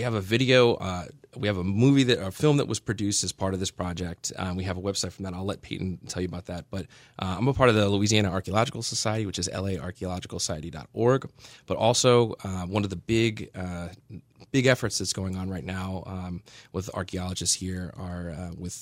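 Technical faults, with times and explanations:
No technical faults detected.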